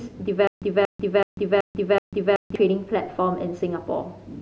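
From 0.47 s to 2.56 s the speech breaks into a stutter with silent gaps. A 233 ms fragment repeats five times, each followed by 144 ms of dead silence, every 377 ms. The likely cause is a stalled stream replaying its last buffer. The missing audio never returns.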